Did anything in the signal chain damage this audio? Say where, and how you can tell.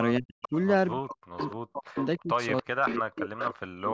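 Yes. Speech suppressed in double talk appears at the call-processing stage. Level drops sharply from 0.19 to 0.53 s and again from 0.94 s to the end, by as much as about 40 dB. The likely cause is an echo canceller that, with both sides talking, attenuated the local talker along with the echo.

An echo leak, also in call processing, shows as a delayed copy trailing the speech by 293 ms. It starts at 0.42, 1.39, 1.99, 2.57 and 3.38 s, about 10 dB below the speech, and the last one is about 5 dB below. This is likely loudspeaker echo that the canceller failed to remove and sent back.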